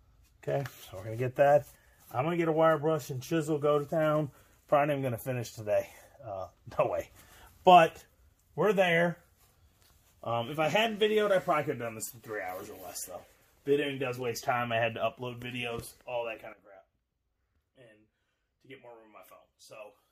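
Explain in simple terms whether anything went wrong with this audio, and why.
Two sudden gain jumps. Sound and background abruptly get louder from 6.84 to 8.02 s, then much quieter from 16.53 s. Likely an instant level change.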